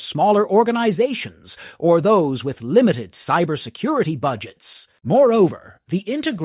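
No technical faults are audible.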